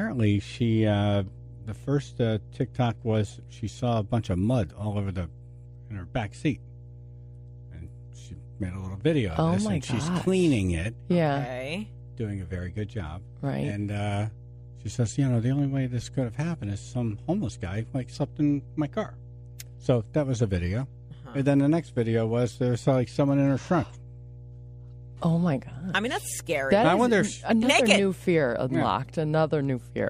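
A steady mains hum runs under the audio from start to finish, a low tone at 60 Hz with some low harmonics, sitting roughly 20 dB below the signal. It points to a ground loop or nearby transformer coupling the power line into the signal path.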